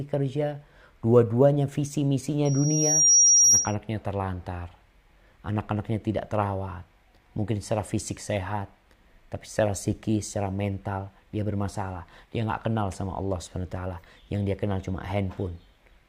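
Loudspeaker feedback squeal from 2.45 to 3.75 s: the microphone re-amplifies its own loudspeaker output, so a 5.7 kHz tone swells over roughly 0.7 s to about 10 dB above the sound.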